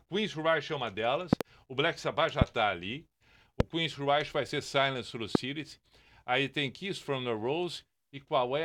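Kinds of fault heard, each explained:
Loud pop: sharp thumps far louder than the speech, first a quick double pop after "é uma", then single ones before "está ali" and after "já está ali". Speech continues beneath each, unlike a dropout, suggesting a likely electrical spike from a plug, switch or static.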